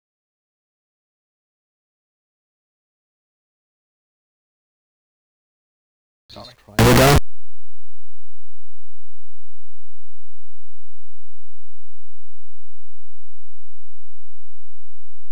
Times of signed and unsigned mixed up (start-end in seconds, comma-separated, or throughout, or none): 6.79-15.31